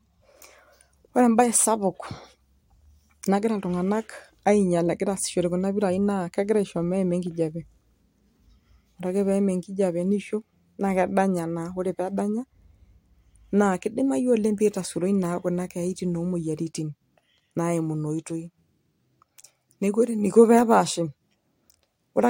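No technical faults can be heard anywhere in the recording.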